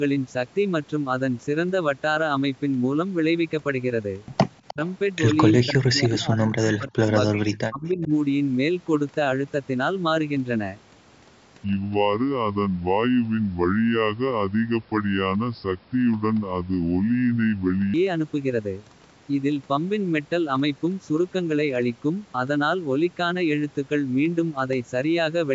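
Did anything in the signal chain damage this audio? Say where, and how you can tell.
Yes. Echo leak at 4.68–4.92 s and 7.86–8.08 s: a delayed copy about 305 ms behind, about 15 and 25 dB down, likely from a loudspeaker echo canceller letting residue through.

Speech suppressed in double talk at 4.74–4.79 s, 5.62–7.08 s and 7.28–8.01 s: the speech drops by roughly 20 to 40 dB, likely the call processing turning down its own talker along with the loudspeaker echo during overlap.

Section at the wrong speed from 11.64 to 17.94 s: playback runs at 0.71× speed, so pitch falls about seven semitones, likely from an editing or playback stage using the wrong clock.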